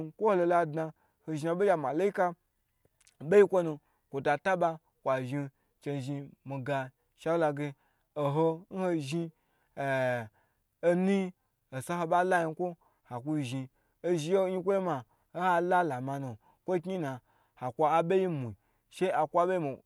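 Nothing stood out on listening to this speech recording; no technical fault could be heard at any point.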